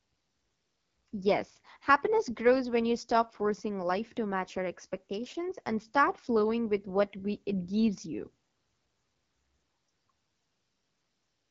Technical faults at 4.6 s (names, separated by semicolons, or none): AMR wideband (HD Voice) codec